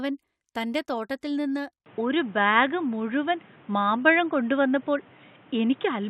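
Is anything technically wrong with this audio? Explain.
Yes. From 1.86 s, right after "തോട്ടത്തിൽ നിന്ന്", to the end, the speech abruptly turns dull and boxy, with nothing above 3.8 kHz. The likely cause is an input switched to a poorer device, whose narrower band replaces the original microphone. There is no gap at the switch, but the level shifts noticeably and a new, faint background noise appears well beneath the speech. That change of noise floor and level is what distinguishes it from a simple bandwidth or filter drop.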